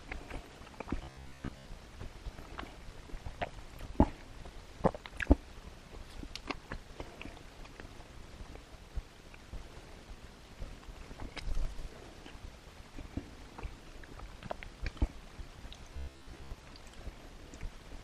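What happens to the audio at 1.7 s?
Robotic sound from repeated short buffers runs from 1.04 to 1.67 s, ending just before 1.7 s. A rigid 66.8 Hz buzz replaces most of the audio, likely from roughly 15 ms buffers being repeated.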